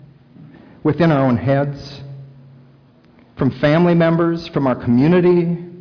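Nothing in the audio stood out as a technical problem on listening.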